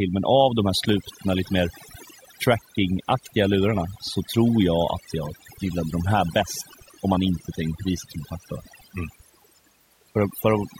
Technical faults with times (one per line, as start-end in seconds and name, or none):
0.00-10.79 overdone noise removal